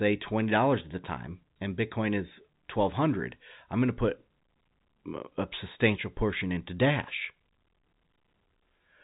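There are no technical faults to describe in this speech, which has the narrow band of G.711 telephone coding with nothing above 3.8 kHz.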